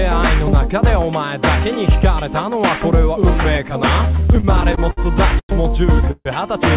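The audio comes through a call path that sounds like a narrowband codec such as G.711, with nothing above 4 kHz. From 4.2 to 4.99 s there are repeated stalls (stutter): eight short hangs where the last sound is held and extended, the longest about 60 ms, adding 152 ms in total and covering about 19% of that span. The jitter buffer kept running dry because packets arrived late or too slowly, so the receiver stretched the audio while waiting. Nothing is lost, but the sound drags and judders. Two call audio freezes follow, at 5.39 to 5.51 s and at 6.11 to 6.27 s. In each, the sound is held and then fades, reaching silence for about 70 ms in the first and about 30 ms in the second, before resuming where it stopped. The first inserts a 100 ms gap and the second a 140 ms gap. The likely cause is packets being held up in transit long enough to empty the buffer, after which the audio carries on with that much extra delay.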